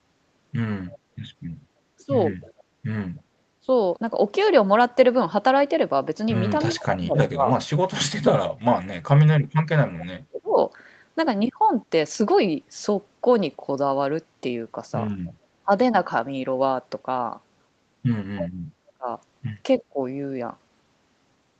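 Faint echo leak arrives at 0.87–0.99 s and again at 2.41–3.2 s: a delayed copy of the speech, 309 ms behind, about 25 to 30 dB down. It likely comes from a far-end loudspeaker whose echo canceller left residue. On a spectrogram it shows as weak, smeared duplicates of the preceding harmonics. From 6.65 to 10.59 s the speech suppressed in double talk dips repeatedly, about 3 s in total and by as much as about 40 dB, likely because the canceller mistook overlapping talk for echo. The waveform shows the envelope collapsing in chunks. Short echo scraps recur at 15.25–15.33 s (about 30 dB down), 18.36–18.49 s (a louder one, about 10 dB down) and 19.78–19.82 s, each 309 ms behind. A brief dip of about 20 dB sits at 15.63–15.7 s, and a deeper one of about 35 dB, roughly half a second in total, falls within 18.72–19.99 s.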